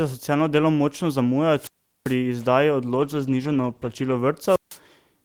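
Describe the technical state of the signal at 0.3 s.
At 0.3 s the speech signal is intact, with no audible technical fault at that moment.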